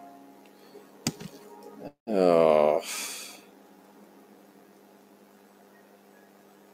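From the start, a noise suppressor applied to music or sounds treats held tones and tails as noise, so they sink by around 10 dB while attacks survive, causing pumping rather than steady dullness. At 1.87 to 2.09 s a call audio freeze stretches the last sound into a fading buzz or hiss, then about 130 ms of silence. The likely cause is a starved jitter buffer. Nothing is lost, unlike a dropout, because the audio resumes where it stopped.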